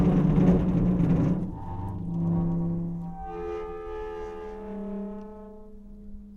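Listening closely to this recording of everyday sounds, nothing stood out as a technical fault at any point.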